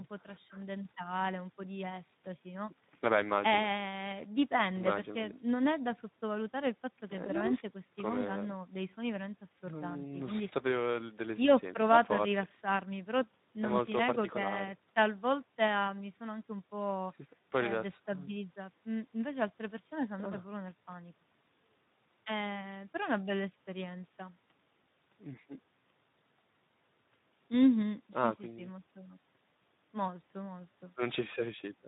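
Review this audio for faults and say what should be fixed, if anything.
Speex codec damage runs through the whole speech clip. Starved of excitation bits, the CELP coder leaves the voice plainly grainy and hoarse, consistent with a bitrate around 11 kbps. Unlike packet loss, the roughness is steady, with no gaps or sudden dropouts. Prevent it by encoding at a higher Speex quality or using a modern codec such as Opus.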